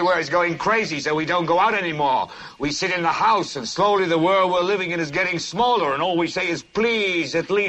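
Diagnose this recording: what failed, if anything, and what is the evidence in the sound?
Nothing stood out on listening, so there is no failure to diagnose here.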